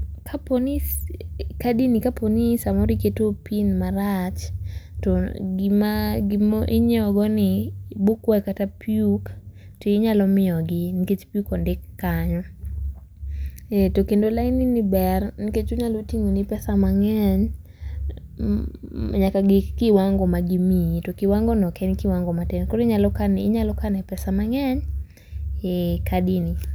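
Speech recording; no technical faults found.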